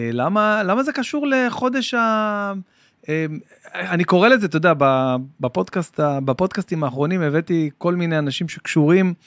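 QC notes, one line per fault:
No faults found in this clip.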